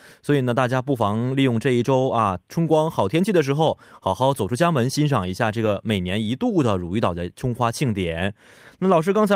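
At 5.65 s and again at 7.85 s the speech turns briefly rough and noisy for about 20 ms, with no gap. Each is a lost packet rebuilt from error correction: the next packet carried a low-bitrate copy, which fits a single 20 ms frame.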